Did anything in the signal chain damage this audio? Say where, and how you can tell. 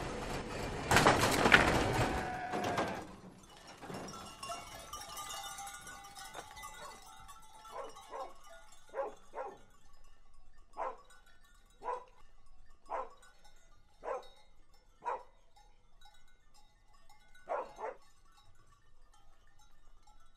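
No, nothing in the chain left an audible mark on this audio, from capture through to playback.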